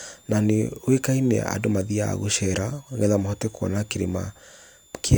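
A switching supply whistle runs under the speech for the whole clip. A power supply's switching leaks in as a faint high tone, wandering between about 3.3 and 3.8 kHz, roughly 35 dB below the speech. A spectrogram shows it as a thin, drifting horizontal line.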